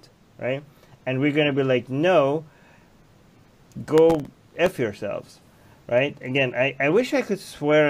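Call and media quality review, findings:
Processor overload crackle, 3.98 to 4.66 s. Gritty tearing over the sound for about 0.7 s, then clean. Probable component: audio processing thread missing real-time deadlines. Around twenty very short buffers, each under a millisecond, miss across that stretch and replay stale audio with hard edges. Unlike a single dropout or network packet loss, it is a dense run of tiny clicks, not one gap, and it ends when the load clears.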